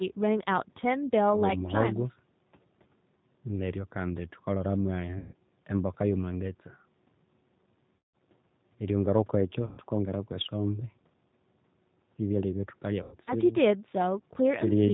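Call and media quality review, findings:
G.729 codec throughout: audio band-limited to 4 kHz, rough and slightly synthetic. This is codec reconstruction, not the call microphone processing, which only removes the lowest bass. The damage is plainly audible and constant, consistent with G.729A at 8 kbit/s.

VoIP packet loss concealed by the speech codec at 5.18–5.33 s, 7.96–8.16 s, 9.66–9.80 s, and 13.03–13.34 s (the last scattered, longest run 90 ms). The decoder extrapolates from its last pitch and filter with falling gain, then recovers weakly. The roughly 120–180 ms losses suggest 30 ms packets.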